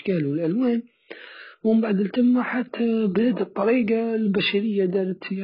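A speech clip with heavy AAC compression damage throughout: nothing survives above 5 kHz, so the sound is dull and muffled, and what remains is smeared, with a warbling, fizzy texture on sibilants and held vowels. The likely cause is AAC-LC encoding at a very low bitrate, around 12 kbps. On a spectrogram this appears as a hard ceiling at 5 kHz, with patchy holes and blotchy noise-filled bands below it.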